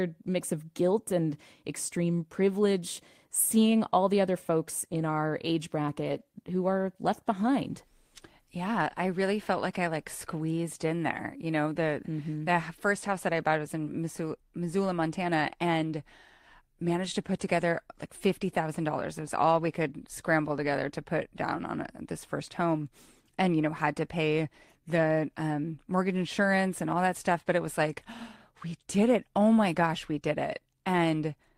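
Packets were lost twice in this speech recording, and each was covered by a lost packet rebuilt from error correction: the packet that followed carried a low-bitrate copy that the decoder played instead, so no gap opens. The sound turns briefly rougher and noisier from 4.93 to 4.99 s, between "all the other folks" and "our age", and again from 6.03 to 6.21 s, after "our age" and before "who are left behind". The second patch, about 100 ms, suggests a longer run of losses.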